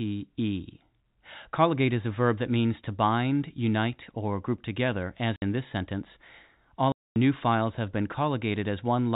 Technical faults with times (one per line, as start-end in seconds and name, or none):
5.36-5.42 packet loss filled with silence
6.92-7.16 packet loss filled with silence